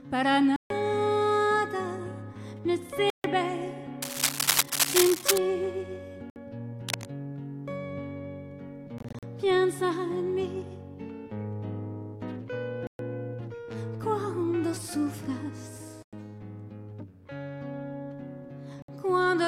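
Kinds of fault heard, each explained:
Bluetooth dropout: at 0.56, 3.1, 6.3, 8.98, 12.87, 16.03 and 18.82 s, the sound cuts to silence for between about 60 and 140 ms and then picks up further along, as though it had continued unheard. This is likely wireless audio packets arriving too late to be played, so the headphones output nothing until fresh ones came. The gap at 8.98 s is broken up, spread over about 0.24 s in short holes up to about 40 ms.
cable scratch noise: from 4.02 to 5.38 s a dense, uneven scratching rides over the sound at about 5 dB above it, and a shorter, quieter burst at 6.89 to 7.05 s sits about 5 dB below it. The rapid rustle is likely a worn cable, plug or control being moved, its contact resistance jumping about and injecting irregular noise bursts into the signal path.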